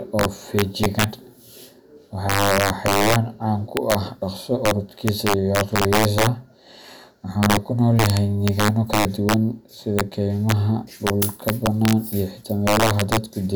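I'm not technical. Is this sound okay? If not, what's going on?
No. Throughout this speech there is integer overflow. The loudest moments exceed the system's number limit and wrap around, producing sharp, violent cracks rather than mild distortion.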